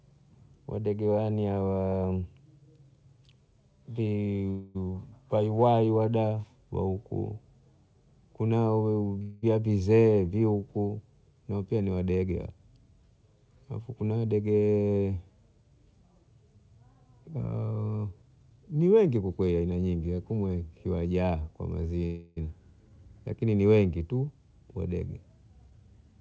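Speech carried over a call link whose band stops at 8 kHz, which fits a G.722 wideband codec at 64 kbps. Three call audio freezes occur at 4.50–4.84 s, 9.22–9.44 s and 22.06–22.38 s. At each, the last sound is drawn out into a fading buzz for roughly 250 ms, 205 ms and 305 ms respectively. The speech then picks up exactly where it stopped, with nothing skipped, so each stall pushes the remainder later by that amount. The likely cause is packets held up in transit so that the jitter buffer ran dry and the receiver had to fill the gap. Jitter buffer speed-ups follow at 13.56–14.90 s (113 % speed), 17.66–19.62 s (114 %) and 25.54–25.88 s (109 %). Here the receiver trims pitch-period-sized slices repeatedly to shed excess buffered delay, about 200 ms, 300 ms and a few tens of milliseconds. The result is speech that sounds hurried while its pitch stays unchanged.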